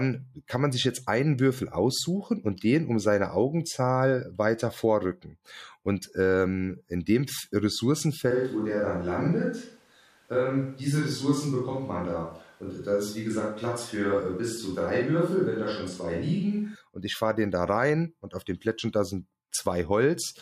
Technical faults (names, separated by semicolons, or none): switch to a distant microphone